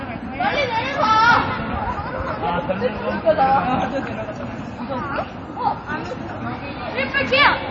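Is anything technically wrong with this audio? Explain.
Yes. Throughout, nothing is present above 7.9 kHz and the audio sounds watery and swirly, likely from heavy MP3 compression, fitting a low bitrate around 32 kbps.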